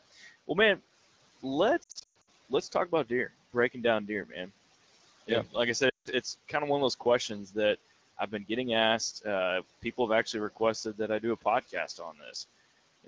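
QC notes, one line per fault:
0.11–0.29 s and 11.68–12.35 s (after "that I do a"), speech cut by the noise suppressor: the suppressor mistook speech for noise and pulled it down by up to about 15 dB and 13 dB, so syllables sound swallowed. A spectrogram shows thinned, gappy consonant energy, and the waveform envelope dips.
1.83–2.29 s (before "let's talk about deer") and 5.89–6.08 s (after "I said"), lost AMR speech frames: the decoder repeated the last pitch and vocal tract settings with falling gain, giving warbles, a longest 120 ms run, and 160 ms lost in the second stretch. The spectrogram shows frozen harmonics fading, and the waveform envelope decays.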